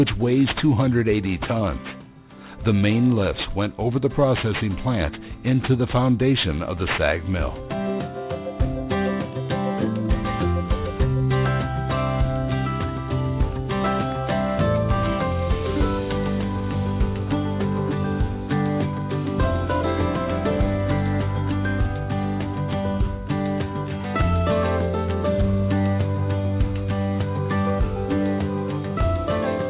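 Aliasing runs through the whole audio: high content folds back below about 4 kHz into gritty, metallic tones roughly 20 dB under the signal, which fits a drop to 8 kHz with no anti-alias filter. Plain band-limiting would sound dull; these folded pitches are new and unrelated.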